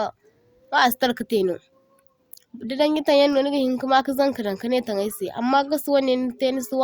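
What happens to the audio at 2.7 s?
Nothing goes wrong at 2.7 s: the speech continues intact through that moment, with no dropout, click, distortion or other fault.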